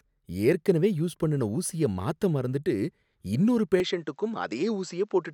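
At 3.8 s the speech turns duller until the end. Nothing above 7.8 kHz remains. A faint new noise floor appears, far below the speech. The level holds steady, with no gap. The likely cause is input switched to a poorer, narrower-band device.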